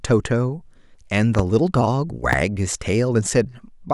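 At 1.35 to 1.42 s a loud pop arrives as a quick double pop, peaking about 10 dB above the speech, and a single louder pop at 2.33 to 2.35 s peaks about 15 dB above it. Both are likely voltage pulses from a switch, plug, static or driver glitch. They show as sharp waveform spikes and thin broadband vertical stripes on a spectrogram, with the speech continuing underneath.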